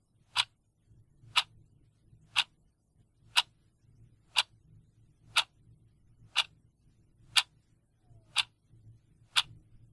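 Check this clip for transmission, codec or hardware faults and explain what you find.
One fault runs from 0.88 s to the end: the resampler restarted on every block. Converting 48 kHz to 24 kHz in separate 40 ms blocks leaves each converter run without the true neighbouring samples, so every block edge carries an error. This gives regular ticking or buzzing at 25 Hz, present only while sound is present.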